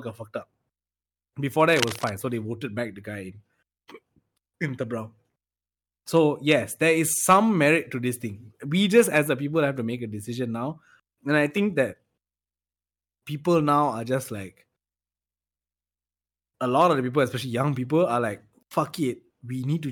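A worn cable, connector or control was likely moved around this point, so its contact resistance jumped about from instant to instant. That produces cable scratch noise from 1.68 to 2.12 s: a dense, irregular burst of scratching and rustling laid over the speech for just under half a second. The noise is fairly loud, only around 10 dB below the speech, so it sits clearly on top of it rather than hiding underneath.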